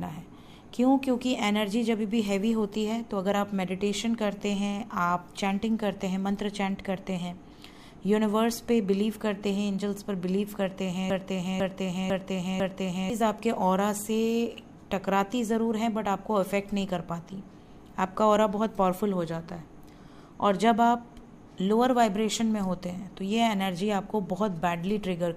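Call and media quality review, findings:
Broken-record loop, 11.10–13.10 s: a 0.5 s fragment repeats four times back to back. Likely stream or player stall resending its last buffer; the intervening audio is lost.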